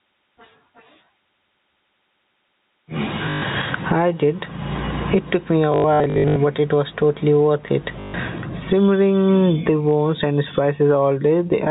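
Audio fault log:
throughout: gain pumping. The swing is around 20 dB. The likely cause is input gain set far too high, with a fast limiter pulling it down whenever the speech gets loud. Loud and soft passages sit close together in level. The speech sounds squashed.
3.30 to 3.42 s, 5.72 to 6.36 s, 8.00 to 8.14 s: packet loss with last packet repeated. The first gap is about 120 ms and the last about 140 ms. The middle stretch holds about 380 ms of scattered dropouts over 640 ms, with runs up to 80 ms. The receiver replays the last audio chunk to fill each gap. The replays don't line up with the pitch. The runs buzz near 50 Hz, which fits 20 ms packets, and sound like a robotic stutter.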